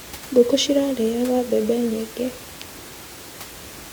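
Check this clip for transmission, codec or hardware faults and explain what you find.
Nothing in the transmission, codec or hardware path stands out here; the only thing under the speech is a bit of ordinary room noise sitting about 18 dB below it, which belongs to the recording space rather than the system.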